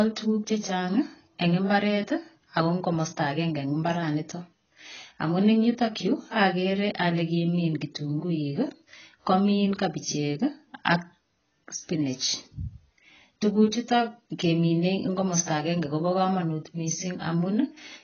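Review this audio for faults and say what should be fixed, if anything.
The speech is dull and smeared for the whole clip, with a watery, warbling texture on sustained sounds and fizzy sibilants. This is heavy codec damage, likely from AAC compression (AAC-LC) at a very low bitrate, which fits roughly 16 kbps. On a spectrogram the energy stops at a hard ceiling at 6.8 kHz, with patchy holes and blotchy noise-filled bands below it. To prevent this, encode at a higher AAC bitrate or keep a lossless master for delivery.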